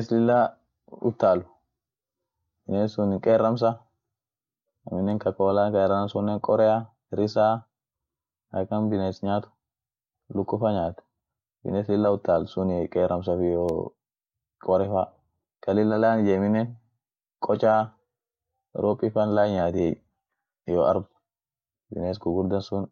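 Two sharp, isolated ticks cut through the speech, a faint one at 5.11 s (about -36 dBFS) and a louder one at 13.69 s (about -18 dBFS). Each is a bit error spike: a flipped bit briefly throws two or three samples off by a power of two.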